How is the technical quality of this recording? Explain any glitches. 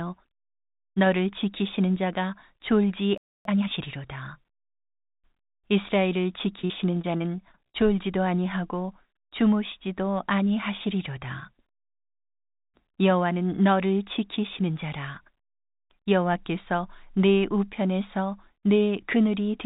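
The recording has three audible glitches: a brief silence, a hurried stretch right after it, and a choppy, robotic passage. It is also narrowband throughout, with nothing above 4 kHz, which fits a G.711 A-law call path.

From 3.18 to 3.45 s there is a playback stall. The sound cuts out mid-flow for about 0.28 s, most likely because the player ran out of buffered data or its playback thread was blocked. On a waveform this shows as a flat, empty stretch inside continuous speech. A spectrogram shows a clean vertical band of nothing across all frequencies before energy resumes.

From 3.45 to 3.71 s comes time-compressed catch-up. To recover the delay from the stall, the player cuts small slices out of its backlog and cross-fades the remaining pieces, so this part plays at twice normal speed while keeping its pitch. It sounds rushed. A spectrogram shows harmonics at normal spacing but syllables packed unnaturally close together. 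On the waveform, syllable envelopes are squeezed tightly.

From 6.62 to 7.76 s there is repeated packet loss, heard as robotic sound. Seven short holes, the longest about 49 ms, add up to about 180 ms of missing audio. Each hole is patched by extending the previous sound, and those patches fill about 17% of the span. The result is choppy, with pieces missing. A spectrogram shows smeared, flat-toned segments where harmonics freeze instead of moving. On the waveform, those segments look repetitive and periodic, alternating with normal speech.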